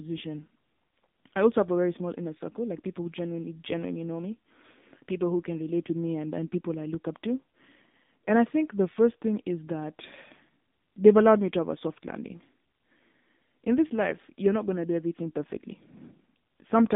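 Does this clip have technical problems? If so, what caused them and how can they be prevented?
Yes. The speech carries AMR narrowband mobile codec damage throughout. The band sits near 200 Hz to 3.7 kHz, and nothing passes above 3.8 kHz. A buzzy, synthetic texture fits the 7.4 kbps mode, where sparse pulses drive a vocal-tract model. A spectrogram shows a hard ceiling near 3.8 kHz. Capturing over a wideband or uncompressed path prevents this.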